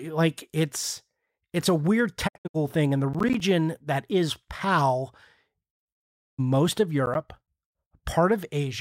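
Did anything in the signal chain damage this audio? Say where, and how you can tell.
Yes. Digital broadcast dropout at the reception stage: between "it's it's a weird" and "thing and the", 2.27–2.56 s, sound is lost in short holes, the longest 64 ms, each fading in about 20 ms. At 6.04–6.40 s a solid 320 ms mute follows. The receiver muted on failed frames.

Processor overload crackle at the driver or buffer stage: after "thing and the", 3.14–3.40 s, before "that is", and again at 7.06–7.48 s, gritty tearing rides on the speech. Gaps of roughly 10 ms each point to missed buffer deadlines, with each late buffer filled by silence.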